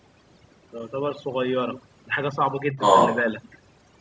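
Overdone noise removal runs through the whole clip: an overly strong noise reducer pulls bands near its noise estimate right down, leaving near-silent, twinkly gaps in the background.

Other side's voice leaking through appears faintly from 0.80 to 0.84 s, a brief scrap far below the speech, likely loudspeaker echo the canceller failed to remove.

Speech suppressed in double talk follows from 2.73 to 2.78 s, a shallow dip of a few decibels lasting about 50 ms, likely the echo canceller turning the talker down while both sides spoke.

Other side's voice leaking through then returns from 2.78 to 3.19 s, this time louder than the talker.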